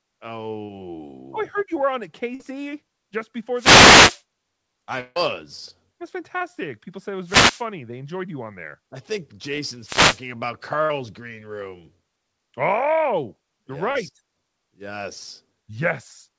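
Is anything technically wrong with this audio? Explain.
Yes, this speech clip has several faults, heard over a call path whose audio stops at 8 kHz, which fits the G.722 codec.

Short concealed packet loss at 0.65, 6.38 and 13.91 s (the last just after "you're yes"): 30 to 40 ms never arrived and was rebuilt from the preceding sound. Each is a brief smear, seen as a short stretch of smoothed, repeated spectral texture.

Burst of packet loss at 2.35 s, after "you were on a", and at 10.85 s: about 50 ms went missing and was filled by a held, fading continuation. It sounds like a brief held buzz or fading hiss, and the waveform shows a short tapering stretch with the original sound skipped.

Wireless microphone noise hit from 3.54 to 4.23 s, 7.24 to 7.65 s (after "said it") and 9.80 to 10.25 s: the FM radio link faded and receiver noise surged. These are swishes of static, seen as broadband noise washing over the speech on a spectrogram.

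Long network dropout from 5.00 to 5.17 s: about 150 ms of audio is replaced by a continuation that fades, then the speech resumes further on. The likely cause is a network stall. A spectrogram shows a smeared, decaying stretch in place of normal speech.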